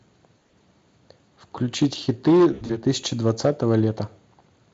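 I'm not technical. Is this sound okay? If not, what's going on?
No. Around 0.37 to 0.54 s, and again from 2.53 to 2.78 s, there is VoIP packet loss concealed by the speech codec. Pieces of the call never arrived, and the receiver filled each gap by stretching the last sound into a brief buzzy or smeared tone. The second gap is longer and rougher.

From 1.82 to 3.85 s there is hard clipping. The signal was too loud for one stage to pass, so its peaks were sliced flat. This adds a harsh, crackly fuzz to the louder moments, and the second dropout falls inside that stretch.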